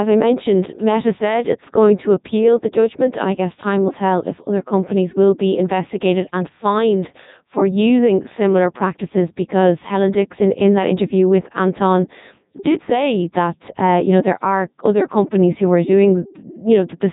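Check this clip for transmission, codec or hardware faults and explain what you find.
The speech has been through a Codec 2 vocoder for its whole length, with heavy damage. The decoder rebuilds the voice from sine waves driven by pitch, voicing, energy and a spectral envelope, so the original waveform is gone and the result sounds robotic and buzzy. Nothing is present above 3.8 kHz, and the coarseness fits the 3.2 kbit/s mode.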